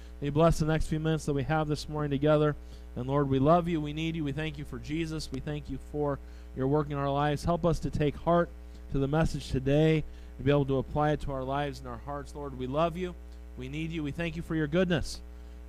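Two sharp pops between 5.34 and 5.52 s jump out above the sound, which carries on underneath. This loud pop was likely caused by a sudden voltage step entering the signal chain.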